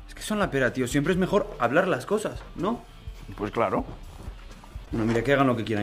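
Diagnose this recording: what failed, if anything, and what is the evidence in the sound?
The compressed stream carries damaged data near the end: at 4.82 to 4.88 s the decoder misreads corrupted frames, loses sync and hunts for the next valid header. For about 56 ms this comes out as a brief glitch in the sound.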